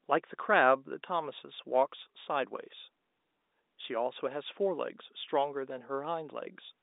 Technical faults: none

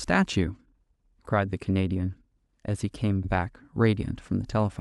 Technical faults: repeated frames

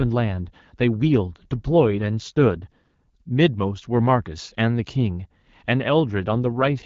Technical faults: AMR rate drop

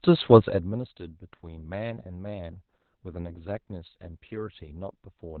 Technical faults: Opus voice compression

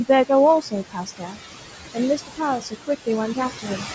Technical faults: overdone noise removal; noise suppressor artifacts; speech cut by the noise suppressor

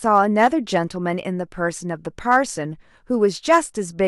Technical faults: hard clipping

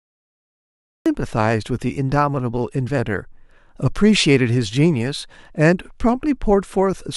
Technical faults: cut-off start

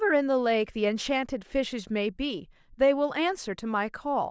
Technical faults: none

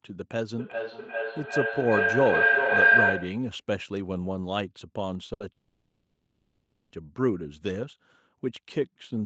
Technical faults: feedback howl; short stall from a late packet; call audio freeze

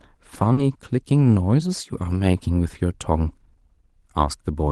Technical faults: short concealed packet loss; lost packet rebuilt from error correction

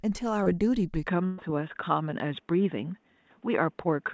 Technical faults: short concealed packet loss; input switched to a poorer device; burst of packet loss

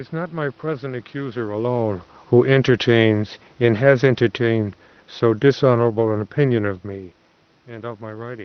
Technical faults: automatic gain falling

